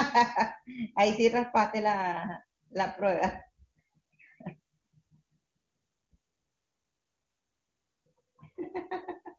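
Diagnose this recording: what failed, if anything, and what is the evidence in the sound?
Nothing in this speech recording stood out as a failure on listening, with the AMR wideband (HD Voice) path at 23.85 kbit/s giving no audible sign of trouble at any stage.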